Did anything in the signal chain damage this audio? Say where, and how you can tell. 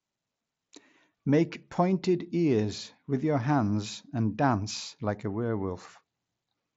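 No, nothing in the signal chain damaged this speech.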